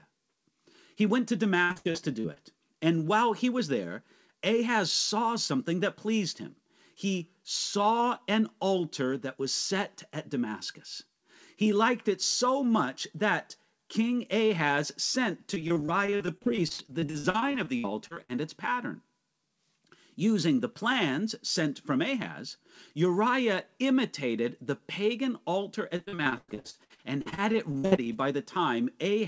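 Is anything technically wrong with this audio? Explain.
Yes. Repeated packet loss (robotic sound) occurs at 1.64–2.38 s after "went to", 15.54–18.31 s after "sent to", and 25.97–28.08 s after "imitated the pagan altar". Packets kept dropping out, and each hole was filled by extending the preceding sound. That patching covers roughly 28–36% of each stretch, with single gaps up to about 105 ms, so the speech turns choppy with pieces missing. Throughout, nothing sits above 8 kHz, which fits a G.722 call codec.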